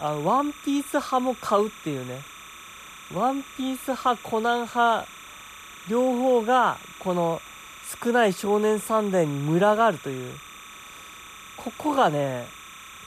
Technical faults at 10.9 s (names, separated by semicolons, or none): timecode bleed